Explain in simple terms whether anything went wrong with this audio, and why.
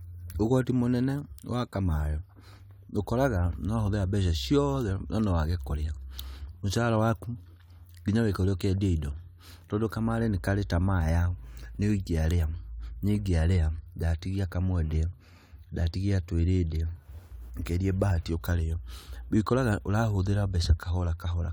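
Nothing went wrong with this speech recording. At no point does any technical problem get in the way of the sound.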